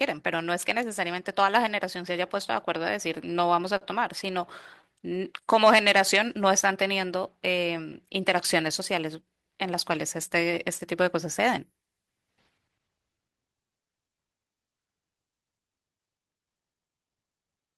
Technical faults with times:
3.15-4.85 scattered short gaps
4.86-7.06 jitter buffer slow-down
9.05-9.91 jitter buffer speed-up

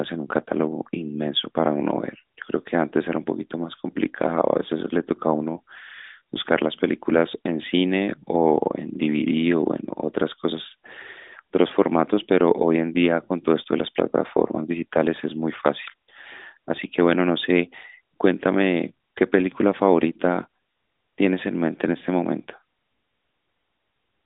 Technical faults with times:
none

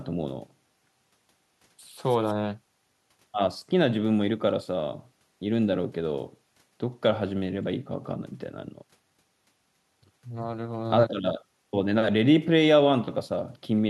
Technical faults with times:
none

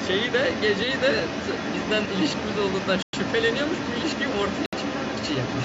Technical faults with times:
0.00-5.64 other side's voice leaking through
3.02-3.13 Bluetooth stall
4.66-4.73 Bluetooth stall

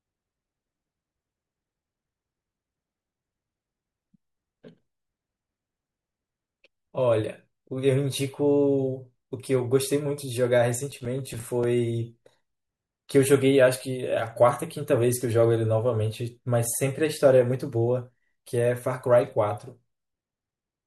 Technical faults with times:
10.91-11.64 processor overload crackle

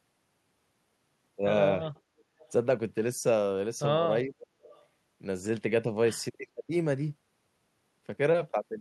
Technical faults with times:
2.18-2.52 echo leak
2.24-2.39 background gated by the echo canceller
4.24-4.37 speech suppressed in double talk
4.39-4.86 echo leak
6.55-6.71 speech suppressed in double talk

